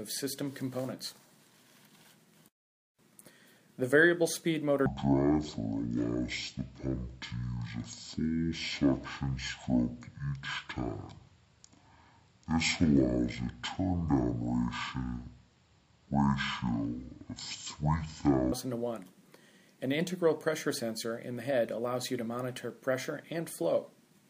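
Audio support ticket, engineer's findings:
Section at the wrong speed, 4.86 to 18.52 s. Audio plays at half speed, pitch about ten semitones lower. Likely clock mismatch in editor or player.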